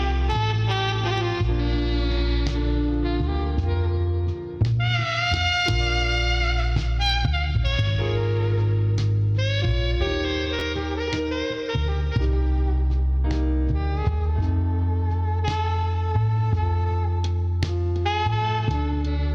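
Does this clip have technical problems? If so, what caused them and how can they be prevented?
Yes. Between 10.59 and 10.61 s, chunks were out of order: one block of about 11.6 ms was delivered a block late and played after its successor. The sound jumbles briefly at the three hard joins. Sequence-numbering blocks and reordering them in a small buffer before playback would prevent it.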